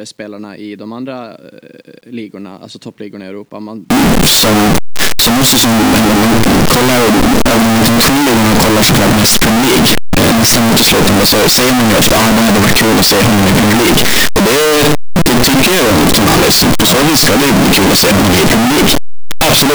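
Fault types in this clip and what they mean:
Signed and unsigned mixed up: the 8-bit samples were likely read with the wrong sign convention, so from 3.9 s the speech turns loud and harshly distorted, quiet parts included.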